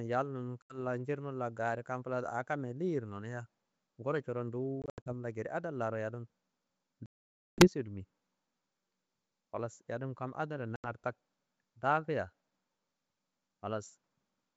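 A speech recording carried over a wideband G.722 link suffers packet loss on an ADPCM call. Hard-edged silent gaps occur at 0.62 s, 4.82 to 5.12 s (scattered), 7.06 to 7.68 s (about half a second) and 10.76 s. After each gap, the decoder's predictor is out of step. The speech comes back slightly distorted before settling.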